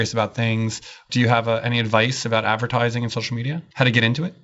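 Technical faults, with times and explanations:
Nothing stood out on listening to this speech, which comes through a G.722 wideband telephone path with nothing above 7.7 kHz.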